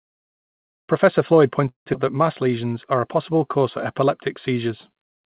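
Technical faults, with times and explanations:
1.68–1.88 s, call audio freeze: the sound halts and the last fragment is stretched into a brief fading buzz that drops to near silence for about 130 ms, with roughly 180 ms inserted in all and nothing lost. The likely cause is delayed packets draining the jitter buffer. On a spectrogram a smeared, decaying band gives way to an almost empty column. The waveform shows a thin tail and then a flat stretch.
1.94–1.97 s, skip ahead: just before "that mass" the audio jumps forward, dropping roughly 150 ms, with only about 6 ms of join between the two sides. This likely happens when buffered audio is discarded to catch up after the earlier freeze had added delay. On a spectrogram the harmonic pattern changes abruptly at a vertical seam. The waveform shows an abrupt change of shape with no gap.
2.43–4.05 s, jitter buffer slow-down: after "that mass" the sound runs at about 92% speed for roughly 1.6 s. 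About 138 ms is added by repeating single pitch periods to rebuild the buffer's reserve, so the pitch stays the same while sounds are drawn out. On a spectrogram the harmonics stay level but stretch horizontally. The waveform shows runs of near-identical repeated cycles. Across all three, the G.711 call path leaves nothing above 4 kHz.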